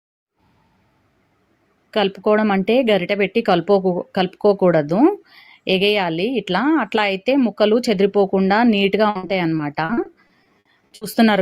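From 9.09 s to 11.15 s, repeated packet loss (robotic sound) sets in. More than a dozen short holes, none over 60 ms, are each patched by extending the previous sound. Unlike a single dropout, this rapid succession makes the audio choppy, with pieces missing.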